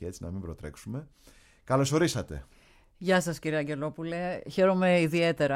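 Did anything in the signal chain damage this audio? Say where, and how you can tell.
No, nothing in the signal chain stood out as damaging this audio on listening.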